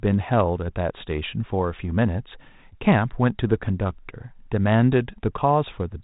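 Speech over a 32 kbit/s G.726 ADPCM path, band-limited to telephone width as that codec always is, with nothing technically wrong to report.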